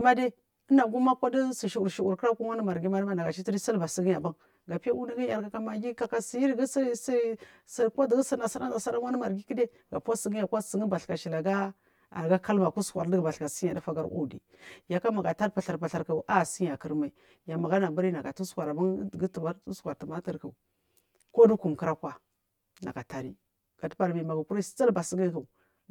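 Channel delay with comb filtering runs through the whole clip. One channel arrives about 10 ms late and the two are summed to mono. Cancellations start near 50 Hz and repeat at regular intervals. The speech sounds hollow and phasey throughout.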